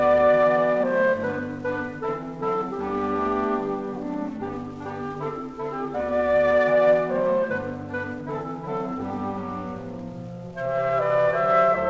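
No faults heard; the audio carries the band limit of a wideband call path, with nothing above 8 kHz, consistent with G.722 at 64 kbps.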